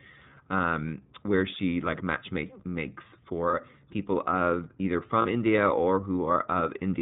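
Band-limited, plainly rough and synthetic-sounding speech runs through the whole recording with nothing above 4 kHz, the mark of the iLBC codec, likely in its 30 ms-frame, 13.33 kbps mode, which codes each frame's excitation independently. Two brief held, buzzy or breathy vowel-like patches, each about 30 ms long, appear at 3.51 to 3.55 s, right after "she like match makes" and before "people of either", and at 5.22 to 5.26 s, right after "people of either". These are lost iLBC frames, each consistent with a single dropped packet, where the decoder repeated the last pitch cycle mixed with noise before clean decoding resumed almost at once.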